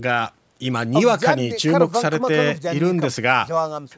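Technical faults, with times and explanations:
No technical faults can be heard in this speech clip. It has passed through a call's microphone processing, which trims the lowest bass and leaves nothing above 8 kHz, as that path normally does.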